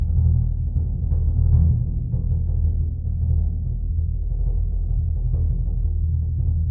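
Nothing in this bit of music trips the ear; it just rolls along with no technical faults to point to.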